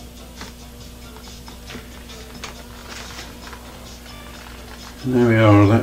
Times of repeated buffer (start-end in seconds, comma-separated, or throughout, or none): 1.37-1.39, 2.79-2.82, 4.16-4.20